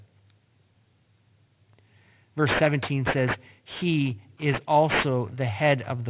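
Throughout the speech there is aliasing. Energy above 4 kHz folds back below that edge, which points to a drop to an 8 kHz rate without an anti-alias filter. Sibilants turn gritty and metallic with fairly strong false tones. Clean band-limiting would only sound dull.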